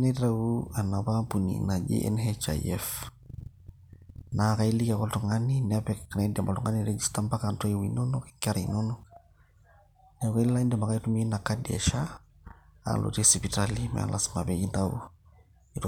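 No technical faults can be heard anywhere in the recording, and the signal stays steady and intact throughout.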